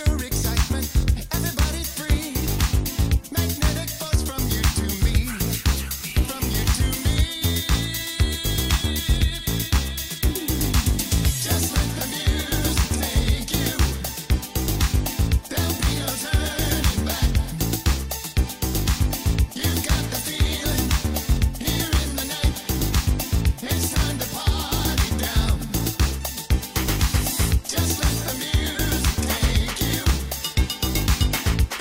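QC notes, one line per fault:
No faults heard anywhere in the clip.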